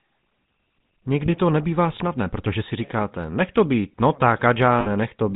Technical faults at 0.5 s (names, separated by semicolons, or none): GSM full-rate codec